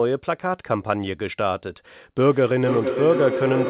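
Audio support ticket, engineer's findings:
Rising tonal howl from 2.22 s to end of clip, loop repeating roughly every half second, pitch near 500 Hz, peaking about 4 dB below speech. Feedback howl: two devices sharing one room on the call, mic-to-speaker loop gaining level each pass. Call path band-limited at 4 kHz.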